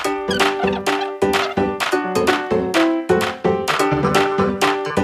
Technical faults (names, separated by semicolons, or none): none